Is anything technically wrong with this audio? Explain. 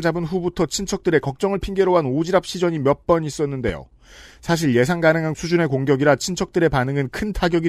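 Yes. From 3.69 to 3.72 s a single loud pop, peaking a few decibels above the speech, cracks over it; likely a sudden voltage pulse from a plug, switch or static.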